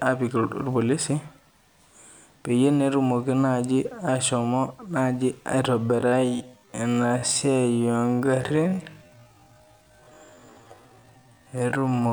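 From 5.82 s onward, a time-stretched section slows to 0.54x speed at unchanged pitch, likely by repeating short pieces. It sounds dragging, with drawn-out spectrogram harmonics.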